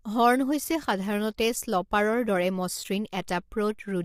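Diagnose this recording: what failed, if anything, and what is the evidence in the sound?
The speech sounds rough and grainy throughout, with noise filling the gaps between harmonics, likely low-delay AAC compression at a low rate, around 32 kbps.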